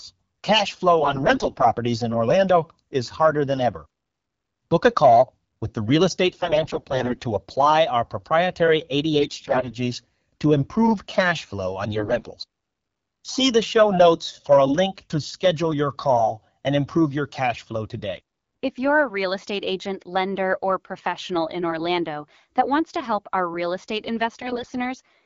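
AMR bit errors hit the speech at 1.02–1.65 s, 6.28–7.18 s, 9.20–9.74 s (the harshest, with a heavy error rate), 11.92–12.31 s and 24.41–24.74 s. Flipped bits in the weakly protected parts of each frame misplace the excitation pulses and skew gain and spectral values, so pitch and level hold roughly but the sound turns hoarse, scratchy and gargly. A spectrogram shows smeared harmonics filled with ragged broadband noise; the waveform stays at level but loses its regular periodic shape. The wideband codec's light, clear character fits a rate near 12.65 kbit/s.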